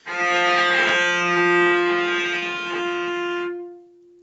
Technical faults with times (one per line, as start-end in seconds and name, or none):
0.89-0.91 overlapping chunks
1.63-1.88 short stall from a late packet
2.39-2.45 short stall from a late packet
2.98-3.00 overlapping chunks
3.56-3.71 short stall from a late packet
3.96-4.04 short stall from a late packet